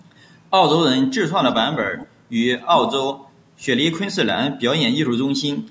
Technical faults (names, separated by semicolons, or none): echo leak; speech suppressed in double talk